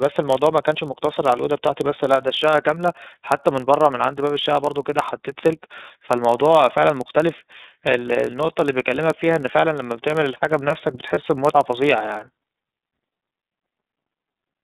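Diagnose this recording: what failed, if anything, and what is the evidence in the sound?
At the codec stage, the audio went through the iLBC codec. The line is band-limited to roughly 150 Hz to 3.7 kHz, with nothing above that. The coding damage is plainly audible as a rough, slightly synthetic texture on the speech. The artefacts follow the 30 ms frame structure, which points to the 13.33 kbps mode. Each frame's excitation is coded on its own, so the grain never settles into a smooth tone.

At the driver or buffer stage, there is a block size mismatch (padded). The writing stage delivers slightly fewer samples than the 1024-sample block the next stage reads, and the remainder of each block is zero-filled. That leaves a tiny silent gap in every block. It is heard throughout as a low buzz at about 43.1 Hz, the block rate. The inserted silence also stretches the audio to 0.999 times normal speed, with pitch essentially unchanged.

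At the network stage, there are lost iLBC frames. One 30 ms frame was lost from 11.13 to 11.18 s. The decoder covered the gap by repeating the last pitch cycle blended with noise, so the sound briefly holds as a buzzy, breathy vowel. Because iLBC frames do not depend on earlier ones, decoding recovers cleanly right after the gap.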